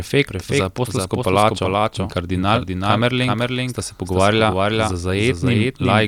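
A doubled audio track runs through the whole speech clip: a second full-band copy trails the original by roughly 0.4 s, sitting about 5 dB quieter. Two captures of the same signal were likely mixed together, one arriving later through a slower path. The result is a dry, distinct repeat of every syllable with no decay or room colour, so each phrase seems to stutter against its own delayed shadow rather than sounding like an echo.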